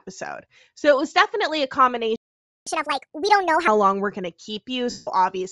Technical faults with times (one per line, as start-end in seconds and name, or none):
0.00-5.51 Bluetooth LC3 compression
2.16-2.67 playback stall
2.67-3.68 catch-up at higher speed
4.90-5.07 lost LE Audio frames